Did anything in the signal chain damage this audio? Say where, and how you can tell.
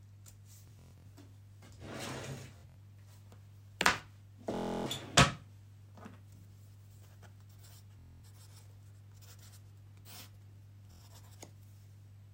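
Yes. Bluetooth stutter on the wireless link at 0.68–1.06, 2.58–2.77, 4.55–4.87, 7.99–8.24 and 10.92–11.02 s. Each is a buzzing repeat of one short slice, up to about 0.3 s, as the receiver replayed its last buffer while packets were late, before the sound jumped ahead.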